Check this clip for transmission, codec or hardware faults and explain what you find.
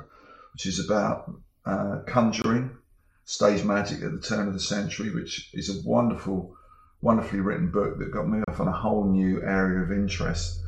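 Two short dropouts break the otherwise continuous sound: a gap at a join of encoded pieces at 2.42 to 2.44 s, about 23 ms long, and another at 8.44 to 8.48 s, about 34 ms long, six seconds apart. Each opens as a brief hole with smeared edges, then the sound resumes exactly where it stopped. Separately encoded segments were joined without trimming, leaving each run's start-up delay and padded final frame in place as silence.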